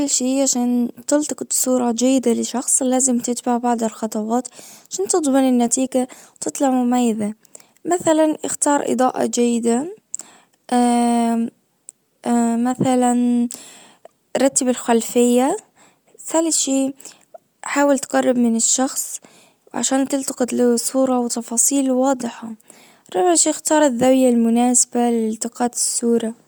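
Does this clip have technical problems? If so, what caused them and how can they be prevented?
Yes. Throughout the speech there is plainly audible codec damage with a breathy, grainy edge on the upper frequencies, likely from Bluetooth LC3 compression. The transform codec works in short frames, which fits 10 ms frames at around 48 kbps, and it replaces discarded upper-spectrum detail with synthetic noise. Unlike a simple low-pass, the band still reaches about 20.1 kHz. To prevent it, record through a wired path or use a higher LC3 bitrate.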